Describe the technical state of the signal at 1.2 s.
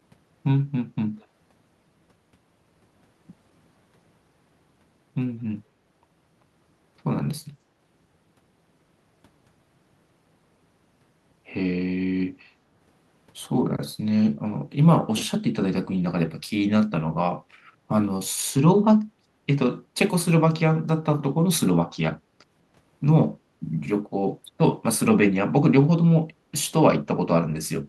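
An echo leak appears from 1.21 to 1.26 s: a brief, very faint scrap of the speech returns about 200 ms after the original, sitting roughly 40 dB below the direct sound, so it registers as a ghostly trace. This is likely a far-end loudspeaker feeding its own microphone, where the echo canceller failed to subtract everything it picked up, letting a short delayed remnant travel back down the line.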